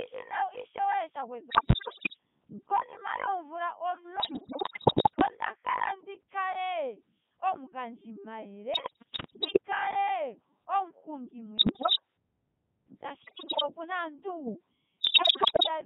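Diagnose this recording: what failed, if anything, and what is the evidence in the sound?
Codec 2 vocoder, throughout the clip, at the codec stage. The speech is buzzy and robotic from start to finish, confined to a band of roughly 150 Hz to 3.5 kHz, with heavy codec damage. The codec sends no waveform. The decoder rebuilds each frame from pitch, voicing, energy and a coarse spectral envelope using summed sine waves. The quality of the sound fits Codec 2's highest mode, about 3.2 kbit/s.

Bit errors on digital voice radio, in six bursts at 1.50–2.17 s, 4.20–5.26 s, 8.74–9.60 s, 11.58–12.00 s, 13.22–13.62 s and 15.01–15.68 s. These happen at the network or radio-link stage. During each burst the synthetic speech jumps in pitch and level, changes tone colour and breaks into warbles and bleeps. The error rate is high, from several percent to about one bit in five, and it is worst in the final burst. 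Each corrupted bit changes the parameters of a whole vocoder frame, so the damage is heard across entire frames.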